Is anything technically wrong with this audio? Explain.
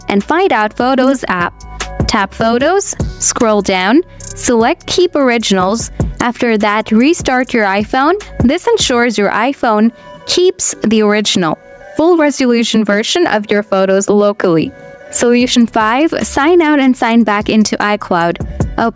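Yes. Gain pumping runs through the whole clip: the gain swings by around 15 dB. The likely cause is input gain set far too high, with a fast limiter pulling it down at each peak. Loud and soft passages sit squashed together. The call microphone processing, with nothing above 8 kHz, is not a fault.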